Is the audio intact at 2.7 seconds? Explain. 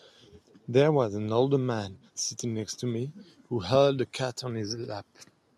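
Yes, the speech at 2.7 seconds is intact, with no dropout, click, distortion or other fault at that moment.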